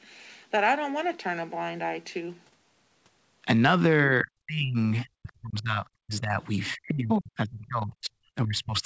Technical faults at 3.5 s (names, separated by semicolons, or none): none